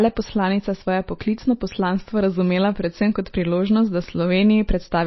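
MP3 compression damage runs through the whole speech clip: nothing is heard above 5.8 kHz, and the sound is plainly watery, with swirling, smeared attacks. This is likely a low-bitrate MP3 encoder cutting the treble and dropping weak frequency lines frame to frame.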